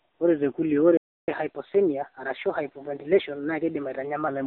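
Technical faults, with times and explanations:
Throughout, AMR narrowband mobile codec: the speech sounds thin, buzzy and synthetic, with nothing above 4 kHz and a telephone band near 250 Hz to 3.5 kHz. Heavy damage fits a low bitrate around 6.7 kbps, where few pulses per frame drive the vocal tract model crudely.
0.97–1.28 s, playback stall: the sound cuts out abruptly mid-flow for about 0.31 s of silence, then resumes. The player likely ran short of data or had its thread blocked, so nothing reached the output until it recovered.
1.28–4.28 s, catch-up at higher speed: straight after the gap the speech runs 1.1 times faster and sits roughly a semitone and a half higher, then settles. The player resamples its backlog to win back the time lost in the stall.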